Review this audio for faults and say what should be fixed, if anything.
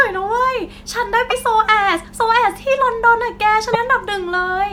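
At 1.29 s and 3.72 s the speech jumps ahead through a roughly 30 ms glitch, likely a broken MP3 bit reservoir after dropped frames. To prevent it, decode to PCM before cutting, or use a frame-aware MP3 editor that rebuilds the reservoir at each edit.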